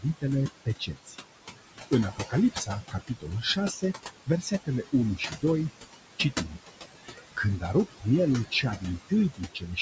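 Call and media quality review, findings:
Noise suppressor artifacts, whole clip. Room noise, only about 9 dB under the speech, is pulled down by about 20 dB in pauses and swells back under the speech. Suppressor gain is being recomputed frame by frame per band. Unlike a gate, the noise never clicks fully shut. Unlike codec artefacts, the noise level tracks the switching between speech and noise.

Speech cut by the noise suppressor at 0.65–1.17 s, 1.91–3.84 s, 4.26–5.44 s, 6.18–6.56 s, 7.03–7.64 s and 8.45–9.79 s. Soft consonants and word endings are swallowed, with drops of about 15 to 20 dB. Only about 150 to 700 ms in each span are hit, longest in the 1.91 s stretch. The suppressor is misclassifying quiet speech as noise. Unlike packet loss, there are no gaps or repeats, only sound fading into the background. The top end stopping at 8 kHz comes from the call's microphone processing, not from these cuts.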